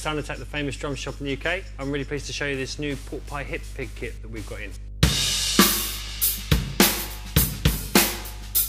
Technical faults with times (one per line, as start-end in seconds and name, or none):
0.00-8.68 mains hum